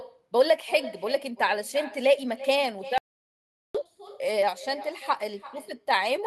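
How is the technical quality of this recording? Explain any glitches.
The technical quality isn't great: there are two clear problems, one running through the whole recording and one short gap in the middle.

From start to finish the speech carries an echo with no canceller. Every phrase is trailed about a third of a second later by a fainter copy, sitting about 17 dB below the direct speech and sounding thinner. That's the far end's loudspeaker feeding back into their microphone and returning over the network, with nothing in the chain subtracting it. It gives the talker a hollow, slapback shadow.

Then, from 2.98 s to 3.75 s, there's an audio dropout to silence. The speech cuts off abruptly and the next 0.77 s is dead silence, with no room tone or background at all, before the sound picks up again mid-flow. That points to the input being lost while the recorder kept writing silence, likely from a brief disconnection, link failure or accidental mute. 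Whatever was said in that stretch is simply gone.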